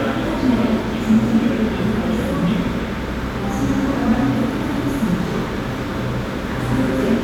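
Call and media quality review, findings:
No audible faults found in the audio.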